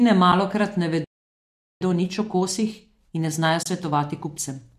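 Speech, carried through what sounds like a low-delay AAC coding path, shows AAC frame loss with muting in two places. At 0.32 s there is a very brief soft-edged dropout, about 10 ms of missing sound, which fits a single lost frame of a low-delay AAC stream. A longer hole of about 30 ms runs from 3.63 to 3.66 s, consistent with three consecutive lost frames. In both cases the decoder zeroed the missing spectrum, and the overlapping transform windows fade the sound out and back in, so the gaps are smooth. From 1.04 to 1.81 s the audio stops in mid-flow for about 0.77 s. This is a playback stall, most likely the player running short of buffered data or having its output thread held up, leaving silence until it recovered and resumed. After the stall, from 1.81 s to the end of the clip, the speech runs at about 1.15 times normal speed with its pitch unchanged. This is time-compressed catch-up: the player trims its accumulated backlog by cutting out short segments and cross-fading across the joins. 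The result is hurried delivery, and the second frame-loss hole falls within this stretch.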